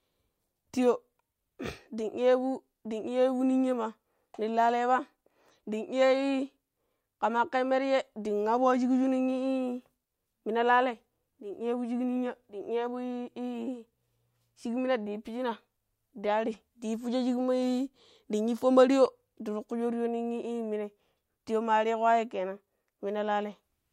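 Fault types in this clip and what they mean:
No technical faults can be heard in this recording.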